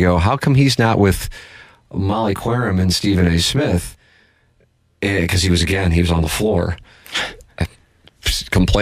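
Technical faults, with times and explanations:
1.91 to 6.63 s, channel delay (comb filtering): one channel runs around 20 ms behind the other, and summing them to mono cancels the shared speech at evenly spaced frequencies from about 20 Hz upward, leaving a rough, slightly doubled sound.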